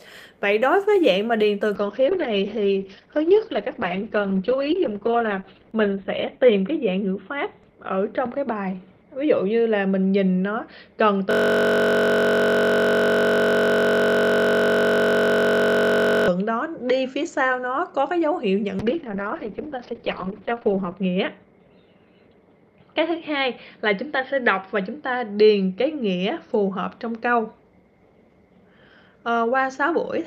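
From 1.77 s a call bitrate drop takes the encoder from 40 to 8 kbps and cuts the bandwidth from 20 kHz to 4 kHz, leaving the audio coarse and muffled. Between 11.31 and 16.28 s a system hang loop repeats one 21.33 ms slice, which fits a 1024-sample buffer, producing a steady 46.9 Hz buzz. A second bitrate drop from 18.8 to 26.59 s again falls from 40 to 8 kbps, with the bandwidth going from 8 kHz to 6 kHz.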